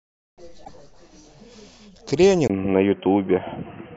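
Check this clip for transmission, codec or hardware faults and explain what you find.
Two faults are audible in the speech.

Damaged data in a compressed stream, 0.61 to 0.69 s: corrupted bytes make the decoder misread those frames and hunt for the next valid header. The result is a short glitch of about 70 ms.

Input switched to a poorer device, from 2.48 s to the end: the capture path changes, likely to a lesser microphone or a headset call profile. After a 20 ms gap the sound turns dull and boxy with nothing above 3.2 kHz. The level shifts by around 5 dB, and a new background noise sits roughly 35 dB under the speech.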